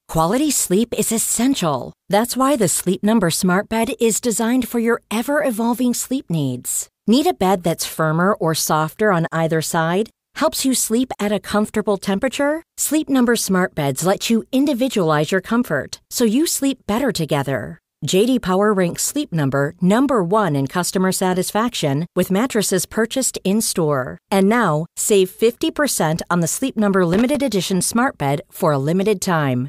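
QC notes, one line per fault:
27.13–27.36 s, loose connector crackle: an irregular burst of scratchy crackle lasting about 0.22 s, just before "edition smart bed". A worn or dirty contact is making and breaking as it shifts, chopping the signal on and off in rapid, uneven bursts.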